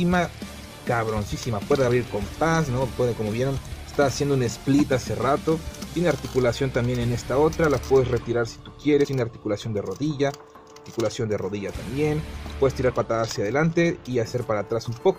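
At 9.03 s and again from 12.89 to 12.91 s, damaged data in the compressed stream makes the decoder misread frames and lose sync, giving a brief chirp, squawk, click or short hole.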